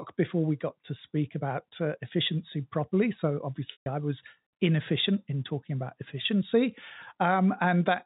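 A short run of packets went missing in transmission on this speech clip, causing packet loss with pitch repetition between 3.72 and 3.86 s. The receiver filled the 140 ms gap, which fits seven 20 ms packets, by replaying the last pitch cycle. That brief held buzz decays to silence well before the gap ends, so a clear hole follows until the speech cross-fades back in. Throughout, the G.711 telephone coding keeps the sound below 4 kHz.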